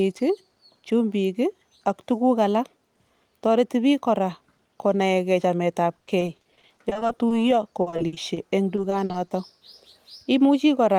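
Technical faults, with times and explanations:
5.99–7.38 s, repeated packet loss (robotic sound): right after "ke chamet ab", packets keep arriving lost or late, with gaps up to 40 ms. Each hole is bridged by stretching the preceding sound, about a third of the span, so the audio turns choppy, with fragments missing.
7.82–9.30 s, repeated packet loss (robotic sound): a second burst of delivery failures, fewer but longer, up to 60 ms. Concealment fills roughly a quarter of this stretch by extending earlier sound, giving the same choppy texture with brief pieces of speech gone.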